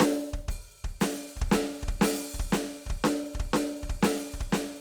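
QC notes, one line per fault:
No faults found in this music clip.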